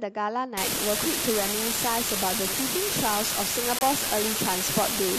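From 0.57 s to the end, an unreliable data bit adds a steady crackling fizz: one marginal data line flips its bit in a random share of samples, each error an identical spike. Unlike vinyl-style clicks or clipping, it continues evenly through pauses, independent of level.

At 3.79 s a corrupt frame is muted: a damaged compressed frame was rejected by the decoder and replaced with silence, leaving an abrupt 40 ms hole lasting one frame length. Unlike a network dropout, timing is preserved; nothing after it shifts or speeds up.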